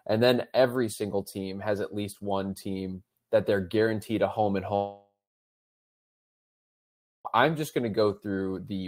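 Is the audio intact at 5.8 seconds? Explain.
No. From 4.75 to 7.27 s the speech breaks off, likely from a long network dropout. A fading buzz fills the gap briefly, then about 2.1 s of silence follows, a flat waveform and blank spectrogram.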